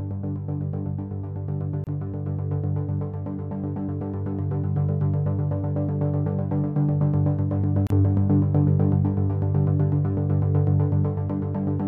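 Gaps at joins of encoded pieces at 1.84 s (28 ms) and 7.87 s (34 ms), six seconds apart: separately encoded segments kept their start-up silence and end padding, briefly interrupting continuous sound.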